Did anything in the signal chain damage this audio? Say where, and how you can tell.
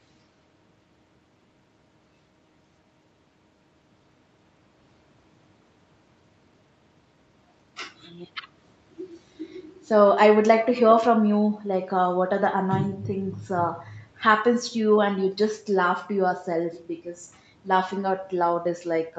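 No, nothing in the signal chain damaged this audio.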